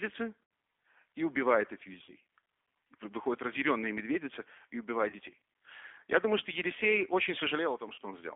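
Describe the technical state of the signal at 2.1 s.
Right at 2.1 s you're at the tail of a VoIP packet loss concealed by the speech codec, running 2.04 to 2.11 s just after "и убивает этих". About 40 ms went missing, which fits two lost packets. The decoder stretched its last pitch and filter into a fading buzzy tone or coloured noise. Underneath, the whole clip rides on the G.729 codec at 8 kbit/s, squeezed into roughly 250 Hz to 3.5 kHz, so that moment also carries the codec's plainly audible rough, synthetic edge.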